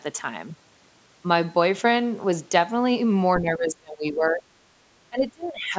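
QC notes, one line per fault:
3.41–4.43 s, speech suppressed in double talk: the echo canceller likely mistook overlapping talk for echo and cut the speech, which drops about 25 dB for roughly a second.
5.09–5.76 s, speech suppressed in double talk: the echo canceller likely clamped down again during overlapping talk, so the speech sinks about 25 dB until near the end.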